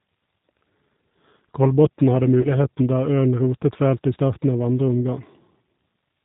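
The whole recording passes through the G.729 codec, and its damage is plainly audible. No energy reaches above 4 kHz. The speech is rebuilt from a vocal tract model and a few pulses per frame. It sounds rough and slightly synthetic, which fits an 8 kbit/s stream.

From 2.41 to 2.49 s there is VoIP packet loss concealed by the speech codec. About 30 ms of audio, one packet's worth, went missing. The decoder filled the gap by repeating its last pitch and filter. That gives a brief, fading smear, and the speech stays weak until about 2.49 s.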